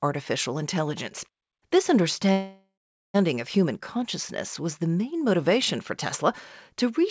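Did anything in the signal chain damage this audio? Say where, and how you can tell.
Yes. At the network and jitter-buffer stage there is a call audio freeze from 2.32 to 3.16 s. The last sound carries on and fades, then goes silent for about 410 ms before the audio resumes exactly where it stopped. Nothing is lost, but everything after 3.16 s arrives about 0.82 s late. This is likely packets held up in transit, leaving the jitter buffer empty so the receiver had to fill the gap. The G.722 band limit, with nothing above 8 kHz, belongs to the normal call path.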